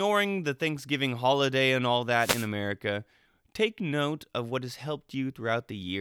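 From 2.18 to 2.48 s, after "holiday and all", a wireless microphone noise hit: the FM link fades, receiver static swishes in, a broadband spectrogram smear.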